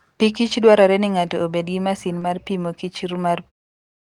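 Short concealed packet loss at 2.19 to 2.23 s, right after "ng'ato obed gi masin" and before "mar pimo kichr": a 20 ms stretch of the speech arrived too late for the decoder, and the receiver papered over it with 20 ms of extrapolated signal built from the preceding sound before blending back into the real stream. It is heard as a brief smeared wobble in the speech. The smooth fade-out near 3.5 s follows later.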